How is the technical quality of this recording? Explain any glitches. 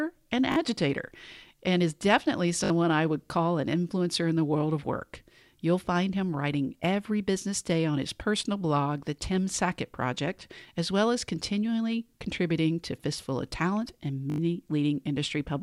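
Three short stutters mar the speech, all from repeated buffers. They fall at 0.52 s, at 2.64 s between "and is definitely" and "I would call an", and at 14.3 s. Each time, fresh audio arrived late, so the device replayed the last block. The loops are very short, which fits a 20 ms buffer. It plays two, three, then four extra times. Hard joins give a brief buzzy stutter. About 40 to 70 ms of audio goes missing each time.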